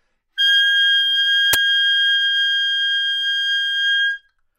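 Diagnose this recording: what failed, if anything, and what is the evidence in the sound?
Uninitialised buffer at 1.53 s, in the driver or buffer stage: a sharp burst of digital noise lasting about 12 ms, which fits a 512-sample buffer played before audio was written to it.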